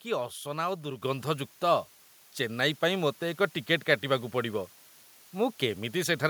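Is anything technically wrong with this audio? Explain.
Yes, there are two faults. Throughout the clip, the audio has low bit depth with dither. It sounds like the signal was stored with only 8 bits, and a small random noise was added before each sample was rounded to the nearest step. That dither turns the coarse rounding error into steady, even white noise instead of grainy distortion. The result is a constant hiss sitting roughly 30 dB below the speech, present under every word and in the pauses alike.

At 1.02 s, the microphone volume is stepped up. The call software apparently judged the input too quiet and raised the device's input gain in a single jump rather than gradually. Because the change happens at the microphone, the speech and the background rise together, by about 6 dB, in an instant. The level shifts abruptly at that point.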